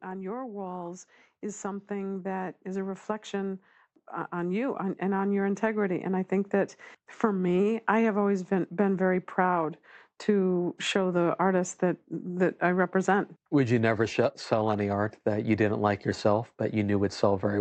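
The automatic gain control judged the input too quiet and kept raising its gain, so after "on your walls is" the speech and background noise swell together by about 9 dB from 1.61 to 6.59 s, settling before "for me i have".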